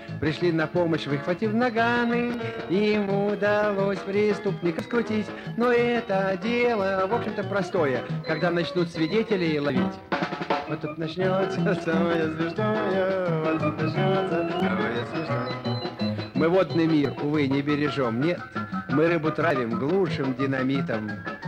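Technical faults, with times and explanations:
2.34, 4.79, 7.25, 9.70, 12.15, 14.60, 17.05 and 19.51 s, audio missing between chunks: the recording was likely handled in blocks of about 2.5 s, and a short slice was dropped each time one block closed and the next opened. Roughly 50 ms goes missing at each joint, and the two sides butt together with no silence, so the sound skips forward abruptly at these steady intervals of about 2.45 s.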